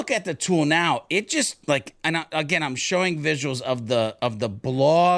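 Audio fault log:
No fault is audible anywhere in the speech, with the signal holding steady and continuous across the whole recording.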